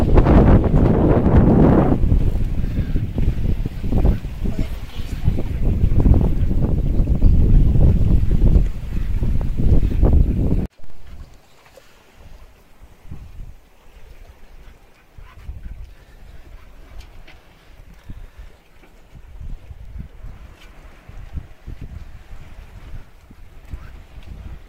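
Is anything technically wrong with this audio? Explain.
Yes. Damaged data in a compressed stream at 1.04 s: corrupted bytes make the decoder misread frames and lose sync, which produces a brief chirp, squawk, click or short hole in the audio.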